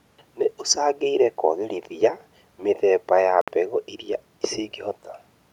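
A Bluetooth stall at 3.41 s cuts the speech to silence for about 62 ms before it picks up again at 3.48 s. The likely cause is radio interference delaying packets, so the headphones' buffer emptied and playback paused until retransmitted audio arrived.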